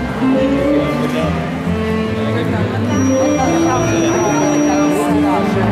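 From 2.84 s to 5.02 s a feedback whistle sits behind the sound: a thin, steady tone near 5.8 kHz, about 15 dB below the main signal, that swells and fades slowly in level. The likely cause is a loudspeaker-to-microphone loop held just at the edge of feedback, so one frequency keeps ringing without building. It differs from runaway howl because it never builds into a howl, and from a fixed electrical tone because its level drifts.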